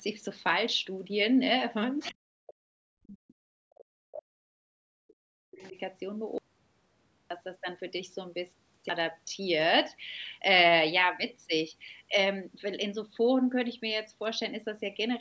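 At 2.0 to 2.14 s a faint second voice, about 20 dB below the main speech, slips through. This is the other side's voice leaking through, likely loudspeaker sound that the echo canceller left in the microphone. It is a separate voice rather than a change in the talker's own tone, which sets it apart from the suppression that follows.

From 2.12 to 5.76 s the speech is suppressed in double talk. It repeatedly dips and chops, by as much as about 40 dB, over roughly three seconds in total. The likely cause is the canceller turning down both voices at once while they overlap. Unlike a dropout, the gaps are not dead: weakened fragments of speech remain and return in pieces.

At 5.57 to 5.71 s the other side's voice leaks through again, barely audible at about 35 dB under the speech, likely another brief residue of echo.

From 6.38 to 7.30 s there is an audio dropout to silence lasting 0.92 s, likely an input that was lost while silence kept being written. 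The gap is silent with no room tone at all. That total emptiness distinguishes it from the partial ducking earlier.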